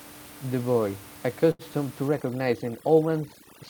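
A packet arrived late at 1.51 s and the jitter buffer ran dry, so the receiver held on to the last bit of sound for about 78 ms until the data turned up. That is a short stall from a late packet, lasting through 1.62 s. Nothing is lost from the speech. Instead, one sound is drawn out unnaturally long with a faint buzz or dip, and everything after it plays about 78 ms later than it would have. From 2.08 s to the end of the speech, overdone noise removal takes hold. A noise reducer set far too aggressively is shutting off individual frequency bands whenever they sink toward its noise estimate, and the softer parts of the speech get cut along with the background noise. The room noise, about 21 dB below the speech before this point, collapses into near silence with small twinkling specks.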